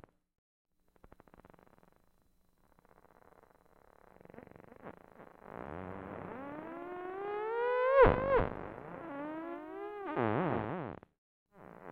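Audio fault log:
throughout, doubled audio track: a second, full-band copy of the sound trails the original by around 300 ms at roughly 5 dB lower level, with no decay or room colour, so every onset is heard twice as a clean slapback. The likely cause is the same signal being captured again through a slower path. On a waveform each transient has a smaller twin about a third of a second later; a spectrogram shows every pattern repeated at that fixed offset.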